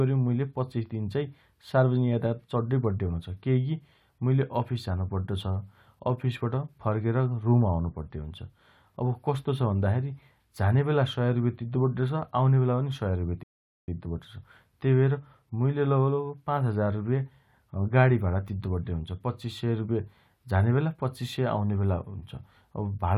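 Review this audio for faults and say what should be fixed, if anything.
Rebuffering stall at 13.43 to 13.88 s: the player ran out of downloaded audio, fell silent for about 0.45 s, then resumed the speech exactly where it stopped. A larger startup buffer or adaptive bitrate switching would keep enough audio downloaded ahead to prevent this.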